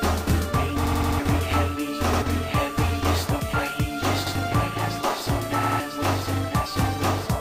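Repeated buffer at 0.85, 2.13, 4.27 and 5.63 s: fresh audio arrived late, so the last block replayed, each about 85 ms long, which fits a 4096-sample buffer. Stutters with hard joins repeat four times at 0.85 s, twice at 5.63 s, and once at the others.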